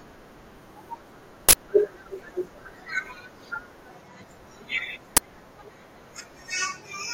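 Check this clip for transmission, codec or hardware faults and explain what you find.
Two uninitialised buffer faults interrupt the speech. The first runs from 1.49 to 1.53 s and the second is a brief hit at 5.17 s. In each case the playback path read out a block of memory before any audio had been written into it, so whatever stale data sat there was treated as samples. The result is a sudden, loud crack or burst of digital noise with no relation to the surrounding sound. The first lasts about 46 ms, which fits a 2048-sample block, and the second about 12 ms, consistent with a 512-sample block.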